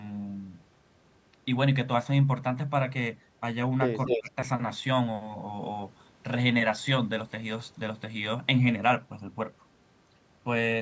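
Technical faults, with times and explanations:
4.07 to 4.31 s, echo leak: A delayed copy of the speech returns about 0.24 s behind the original. It is roughly as loud as the direct speech. The likely cause is a far-end loudspeaker whose echo canceller let part of its microphone pickup through.
4.07 to 4.33 s, speech suppressed in double talk: The speech dips in pieces, by about 15 dB at its deepest, for around 150 ms in total. Both sides sound at once here. The echo canceller likely could not separate talker from echo and turned both down.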